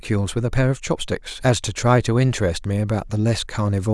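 Nothing in this speech recording stands out as a technical fault.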